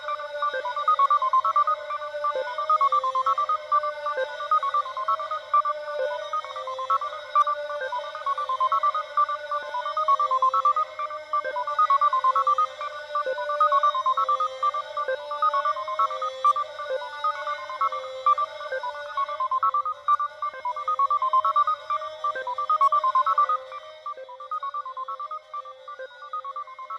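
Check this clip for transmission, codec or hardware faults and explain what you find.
One fault is present: zipper noise from 23.45 to 24.27 s, where the level falls by about 10 dB in coarse unsmoothed steps at roughly 40 per second. Each step clicks, giving a fast ticking that rides on the sound. The waveform shows a staircase envelope, and the spectrogram shows faint vertical broadband lines at each step.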